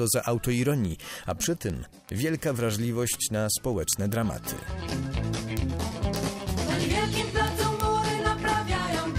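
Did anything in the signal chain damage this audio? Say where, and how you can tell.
Yes. A steady train of sharp single-sample ticks of uneven strength runs from 0.13 s to 9.18 s, about every 0.07 s. These are word clock ticks: the receiving device isn't locked to the sender's clock, and with a mismatch of roughly 300 ppm it drops or repeats a sample at each slip.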